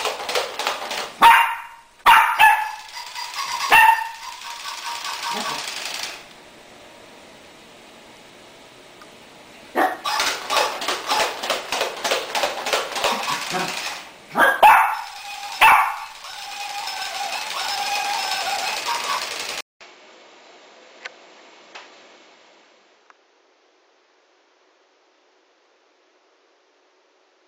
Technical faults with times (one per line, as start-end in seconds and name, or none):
19.61-27.48 input switched to a poorer device